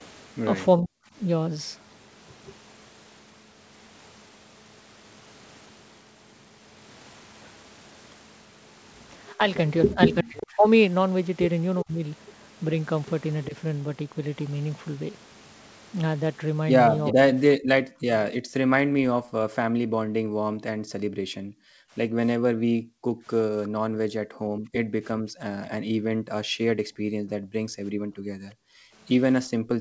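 From 0 to 1.04 s the speech dips and breaks up, falling by roughly 40 dB over about 0.3 s. This is speech suppressed in double talk, likely the echo canceller ducking the talker while both sides spoke. It returns from 9.37 to 13.54 s, with shallower dips of roughly 25 dB totalling about half a second.

From 17.05 to 17.13 s a delayed copy of the speech surfaces about 363 ms behind, roughly 10 dB below it. This is an echo leak, likely loudspeaker sound the canceller failed to remove. Immediately after, from 17.12 to 17.92 s, the speech is suppressed again, dropping roughly 40 dB over about 0.4 s.

From 18.4 s to the end, the room sound dips, falling by as much as about 40 dB. This is background gated by the echo canceller, which pulls the microphone down while the loudspeaker plays.

A second, quieter echo leak appears from 23.64 to 23.69 s, roughly 25 dB under the speech. From 23.9 to 25.35 s, double-talk suppression cuts the speech by roughly 40 dB for about 0.7 s in total. 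Throughout the clip, the G.722 call path limits the audio to nothing above 8 kHz.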